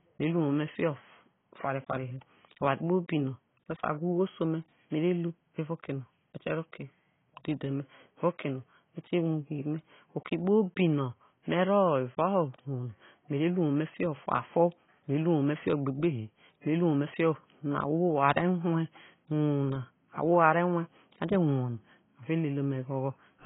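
Throughout, the speech sounds dull and smeared, likely from heavy AAC compression at a very low bitrate. A spectrogram shows nothing above 3.8 kHz.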